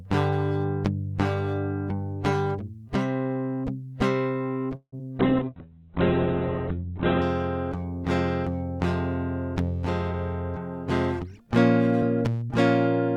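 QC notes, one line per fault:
4.75–4.94 s, call audio freeze: the music stalls for about 170 ms, the last sound carried on and fading, with roughly 80 ms of silence at its tail. This is likely packets held up in transit and the jitter buffer running dry. Playback then resumes where it stopped, so a gap is inserted and nothing is lost.
4.98–5.01 s and 5.17–5.21 s, short concealed packet loss: about 40 ms and then 20 ms of audio never reached the decoder in time. The receiver papered over each hole by extending the preceding sound and blending back, heard as brief smears, with the delay shortening by around 30 ms at the first.
5.20–7.30 s, call bitrate drop: the encoder was pushed from 96 kbps down to 8 kbps, sitting at the bottom for about 2 s. At that rate Opus codes coarsely and narrows the audio band from 20 kHz to 4 kHz, so the music turns muffled and rough.
5.45–5.70 s, jitter buffer slow-down: to rebuild its reserve, the receiver repeated single pitch periods over and over, adding 51 ms. 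The music plays at 83% speed with the pitch unchanged, so sustained sounds stretch out.
11.24–11.48 s and 12.02–12.50 s, jitter buffer speed-up: with too much audio queued, the receiver cut short slices of a pitch period or so, removing roughly 40 ms in each stretch. The music runs at 114% and then 107% speed at the same pitch, so the tempo briefly hurries.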